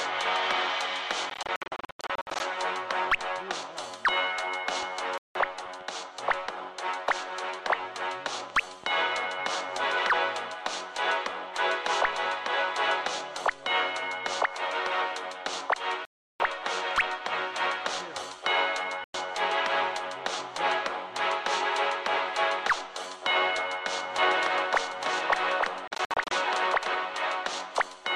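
Bluetooth dropouts break the audio five times: from 1.30 to 2.40 s, where about 595 ms goes missing as a scatter of short holes, the longest 87 ms; at 5.18 to 5.35 s (174 ms); at 16.05 to 16.40 s (348 ms); at 19.04 to 19.14 s (102 ms); and from 25.88 to 26.31 s, where 218 ms drops out in gaps up to 58 ms. Each hole cuts in sharply and the sound comes back further on, as though it had kept playing, most likely because wireless packets arrived too late and were discarded. A doubled audio track runs from 24.19 to 26.95 s. A second, full-band copy at about the same level trails roughly one second behind, with no decay or room colour, and it starts and stops abruptly. That points to a likely second capture through a slower path or two misaligned copies held by an edit.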